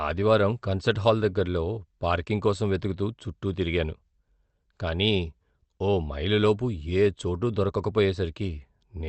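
No technical faults can be heard in the speech, which carries the usual coding texture of a call codec and tops out at 8 kHz, as expected when audio passes through a WebRTC call path like this one.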